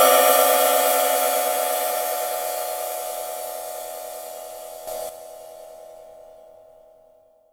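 At 4.87 s the digital gain likely stepped up about 8 dB between adjacent samples without a ramp, holding until 5.09 s. This sudden gain jump makes the sound and its background noise abruptly louder together, then both drop back.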